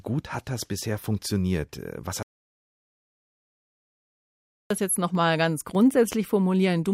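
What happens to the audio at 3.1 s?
At 3.1 s the clip sits inside an audio dropout to silence running from 2.23 to 4.71 s, with speech returning on "das jetzt nochmal ganz". The input was likely lost while zeros kept being written, so unlike a natural pause, the 2.5 s gap has no room tone at all.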